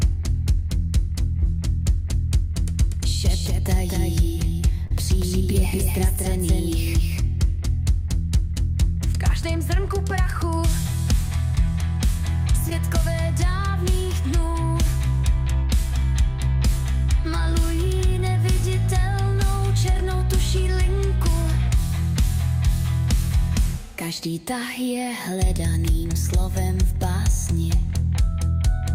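From the start until 9.33 s a doubled audio track runs underneath: a full-band second copy trails about a fifth of a second behind, roughly 5 dB quieter, with no decay or room colour, and cuts off abruptly. This likely comes from a slower second capture path or two misaligned copies in an edit.

Short concealed packet loss occurs at 1.39–1.43 s, 4.87–4.91 s, 11.55–11.58 s and 12.70–12.72 s. Each gap of tens of milliseconds was bridged by extending the preceding sound, heard as a brief smear or wobble.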